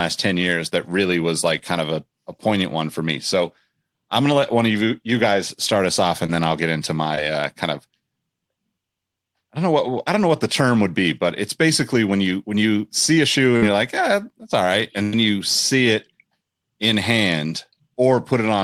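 At 6.26 to 6.29 s and 7.15 to 7.18 s there is short concealed packet loss. About 20 ms and 10 ms of audio never arrived. The decoder extrapolated the preceding sound for roughly 19 ms and 14 ms before blending back, leaving a brief smear or wobble.

A burst of packet loss follows at 13.57 to 13.63 s and again at 15.03 to 15.13 s, dropping about 50 ms and 100 ms. Concealment stretches the last sound into a fading buzz or hiss, then playback resumes with that stretch missing.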